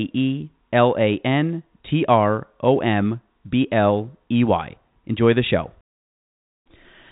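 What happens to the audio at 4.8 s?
At 4.8 s the speech runs on intact, with no fault there, only the narrow telephone band of G.711 coding, which cuts off everything above about 3.8 kHz.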